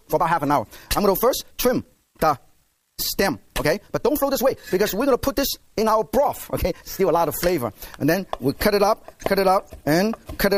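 A time-stretched section runs from the start to 7.18 s, where the audio plays at about 1.43 times its natural pace while its pitch stays put. The likely cause is software compressing this stretch to fit a shorter length by dropping small slices of the waveform and splicing the remainder together. This gives the passage a hurried, rushed texture, and at 7.18 s the pace drops abruptly back to normal.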